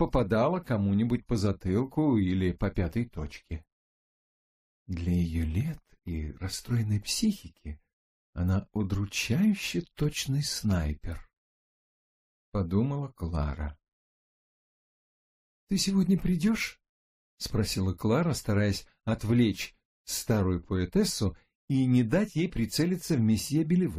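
No technical fault can be heard anywhere in the audio. At no point does anything in the signal chain give itself away.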